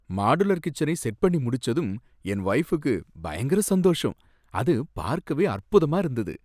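The speech recording carries no audible technical fault at any point in its signal.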